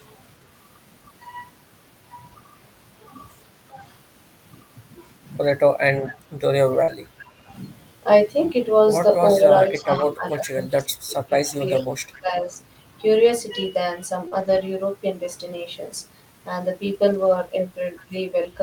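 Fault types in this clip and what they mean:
lost packet rebuilt from error correction: At 5.47 s, 6.88 s, 9.92 to 10.02 s, 13.26 to 13.32 s, 14.32 to 14.61 s and 17.10 to 17.36 s the sound stays continuous but turns coarse and grainy. Each stretch lasts 20 to 160 ms, which fits a run of 20 ms packets replaced by low-bitrate backup copies. Unlike concealment, the real content carries on, only rougher.
echo leak: A faint, delayed copy of the talker returns about 0.42 s after the original, at 6.06 to 6.10 s, 9.35 to 10.35 s, 11.82 to 12.21 s and 17.96 to 18.03 s. It sits about 20 to 30 dB below the speech. It is likely loudspeaker sound that an echo canceller did not fully remove. The long fixed delay and separate, distinct repeat set it apart from room reverberation, which trails smoothly off the sound.
speech suppressed in double talk: Between 6.09 and 7.34 s, 9.37 and 12.53 s, and briefly at 18.09 s, the talker's level drops in patches while other sound overlaps. 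The deepest drops are about 20 dB. About a second and a half is affected in the middle stretch and much less in the others. This is likely an echo canceller turning down both sides at once. The speech fades or thins in level, which sets it apart from packet loss, where the sound breaks off or smears.
short concealed packet loss: Around 6.83 to 6.90 s and 14.28 to 14.34 s, roughly 40 ms of sound never arrived and was filled by extending what came just before. It shows as a brief smear or wobble that then blends back into the real audio. Unlike error-correction rebuilding, nothing of the missing content returns here. The filler only continues the previous pitch or noise, so a short consonant can disappear entirely.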